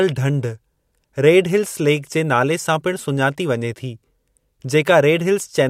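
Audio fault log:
The speech signal shows no technical faults at any point.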